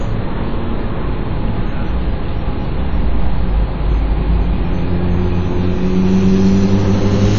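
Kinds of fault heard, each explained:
WMA compression: the sound rings and smears, with a washy hiss that swells and fades along with the signal, and nothing above about 7.1 kHz. This is likely heavy low-bitrate transform coding, which fits around 32 kbps, spreading quantisation noise over long blocks and zeroing weak components.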